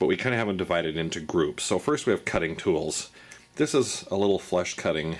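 Nothing stood out as a technical problem on listening to this audio.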